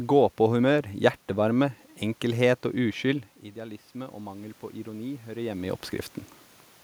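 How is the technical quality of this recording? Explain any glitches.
The recording has one clear technical glitch: the automatic gain rising from 2.77 s to 5.86 s. Around the 3-second mark the talker moves away and the voice at the microphone drops by about 14 dB. The automatic gain control responds by slowly raising its gain, about 6 dB over roughly three seconds. Voice and room noise swell together, so the background noise climbs as the level recovers. On a waveform the envelope shrinks abruptly near 3 s and then widens gradually. On a spectrogram the noise floor between syllables brightens across all frequencies. Around 5.5 s the talker moves again.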